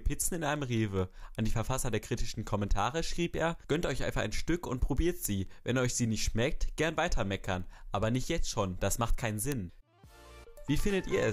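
Word clock ticks run from 0.13 s to 11.23 s: a steady train of clicks roughly every fifth of a second, around fifty in all. The receiving device is reading a digital link on its own clock rather than locking to the sender's, and the two rates differ by something like 100 ppm. Each time the clocks slip a full sample apart, a single sample is dropped or repeated. That small discontinuity in the waveform is heard as a tick.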